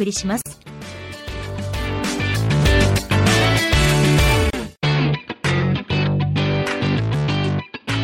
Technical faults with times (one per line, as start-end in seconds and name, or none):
0.41-0.46 gap at a join of encoded pieces
4.50-4.53 gap at a join of encoded pieces